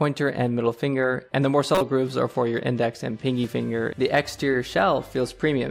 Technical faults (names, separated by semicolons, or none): corrupt frame decoded